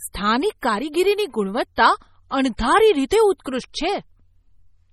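MP3 compression runs through the whole speech clip, and heavy lossy coding is likely the cause. Nothing reaches above 14.7 kHz, where the encoder has cut the treble. Weak frequency detail is dropped and returns from one block to the next, giving a watery, swirling texture and metallic edges on s sounds. The depth of the damage fits a very low bitrate, around 32 kbps.

Pre-echo occurs at 0.61, 0.92, 1.76, 2.57 to 2.59, 3.09 to 3.11 and 3.44 s. Each time, a sharp attack sits late in a coding block, and the noise sized for it spreads back into the quiet moment before. This is heard as a brief hiss of about 15 to 22 ms just ahead of the attack, which then lands soft and smeared.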